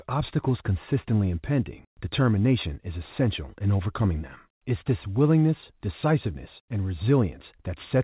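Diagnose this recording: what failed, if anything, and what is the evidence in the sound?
Nothing in this speech recording has failed. It has passed through a call path whose band stops at 4 kHz, with no content above that, which fits a narrowband telephone codec such as G.711 mu-law at 64 kbps.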